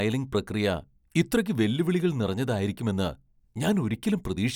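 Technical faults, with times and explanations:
No technical faults can be heard anywhere in the speech; the signal stays continuous with no breaks or disturbances.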